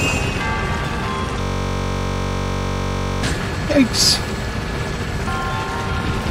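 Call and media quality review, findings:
System hang loop, 1.41–3.23 s: steady 46.9 Hz buzz, one 21.33 ms slice replayed exactly; frozen driver cycling a 1024-sample ring buffer. Identical repeats, not random stutter.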